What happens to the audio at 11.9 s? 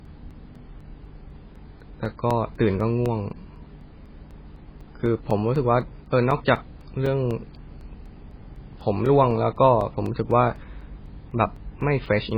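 At 11.9 s the speech falls inside a run of periodic USB or driver dropouts that lasts from 0.05 s to 12.31 s. A blocked bus or driver loses a few milliseconds of audio every 0.25 s and fills the gap with silence, so the speech carries a steady tick about four times a second. On the waveform these are short flat gaps at regular intervals. On a spectrogram each one shows as a thin vertical broadband line.

Running through this moment is heavy codec damage, most likely MP3 compression at a very low rate that points to about 16 kbps. The encoder has discarded everything above 5 kHz and is zeroing weak frequency lines from frame to frame. That gives a watery, swirly quality with dull, blurred sibilants and smeared attacks. A spectrogram shows a hard ceiling at 5 kHz and patchy, blocky holes flickering below it.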